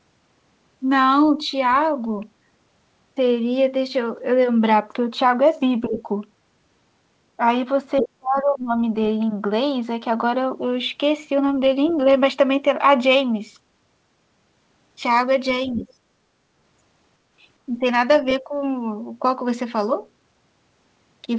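From 5.89 to 6.08 s, the speech dips by about 10 dB. This is likely speech suppressed in double talk, with the echo canceller turning down both sides at once. Under it, from 5.90 to 6.02 s, the other side's voice leaks through, about 10 dB below the speech. That is likely far-end echo the canceller failed to remove. From 7.99 to 8.08 s, the leak is stronger, only about 5 dB down. Then, from 8.01 to 8.75 s, the speech drops by about 30 dB, the longest suppression. A faint trace of the other voice follows at 11.89 to 11.93 s, about 25 dB down. From 15.70 to 15.83 s, another leak about 20 dB down overlaps a 10 dB dip from 15.75 to 15.87 s. The last dip, about 10 dB, falls at 18.41 to 18.53 s.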